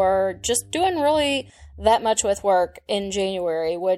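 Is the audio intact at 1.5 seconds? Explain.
No. Mains hum runs from 0.0 s up to 1.5 s, so it is still present at that moment and stops right there. The power line is leaking into the signal, likely through a ground loop or a nearby transformer. The result is a steady low tone at 50 Hz, roughly 25 dB below the speech. It sits under the speech as a constant drone with a few low harmonics above it.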